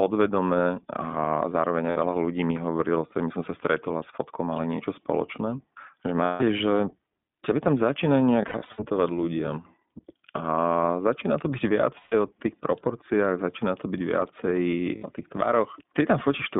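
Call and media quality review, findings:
Throughout: narrow, slightly rough and synthetic speech with no content above about 3.6 kHz and thin lows below about 150 Hz. Probable component: iLBC codec, narrowband, with damage plainly audible. Each 20 ms frame's excitation is coded independently, and the low bitrate leaves a slightly rough, synthetic texture. The band limit and grain fit iLBC's 15.2 kbps mode.

Short held, buzzy vowel-like fills at 1.90 to 2.00 s, 6.24 to 6.44 s, 11.98 to 12.15 s and 14.96 to 15.06 s. A fluttering run of brief fills from 8.42 to 8.83 s has its longest gap well under 0.1 s. Probable component: lost iLBC frames, concealed by the decoder repeating the last pitch cycle mixed with noise. The fills last 60 to 160 ms, fitting several missing 20 ms frames each, and speech recovers immediately after.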